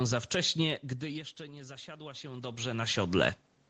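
From 1.01 to 2.84 s, just after "za wcześnie", the automatic gain control reacts to the input falling by about 19 dB and slowly raises its gain, rising by about 5 dB over nearly two seconds. This automatic gain rising is heard as a gradual swell in which the speech and the room noise behind it grow louder together, only partly making up for the quieter input.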